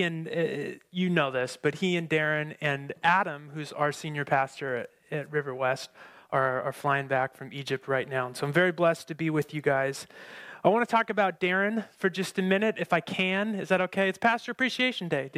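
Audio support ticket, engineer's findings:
No faults found on review.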